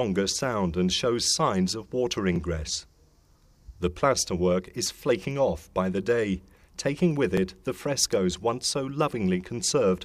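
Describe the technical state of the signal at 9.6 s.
At 9.6 s the signal is intact, with no audible fault at that moment.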